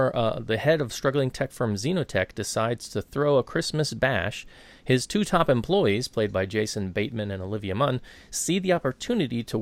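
No technical faults can be heard in this speech recording. Nothing in the signal path draws attention at any point in the timeline.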